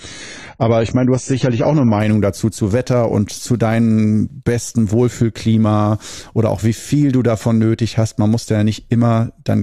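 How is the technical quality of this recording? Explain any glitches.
The quality is limited for the first two seconds and then improves. From 0.0 to 2.0 s the speech sounds dull and smeared because the adaptive stream started at a low bitrate. The player began on a cheap version of the stream so playback could start at once. Nothing is heard above 10 kHz, and the codec artefacts are thicker, which fits roughly 24 kbit/s AAC. Just before "dazu zu" the treble returns abruptly, consistent with a step up to about 96 kbit/s. Unlike a dropout or a codec reset, the change arrives with no gap.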